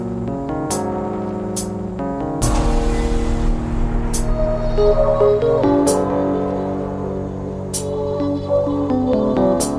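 From 5.62 s to the end at 9.78 s, a wrong sample rate fault slows the audio to about 0.92 of its speed and drops its pitch by about 1.5 semitones, consistent with 24 kHz material played at 22 kHz. On a spectrogram, all harmonics shift downward and stretch horizontally.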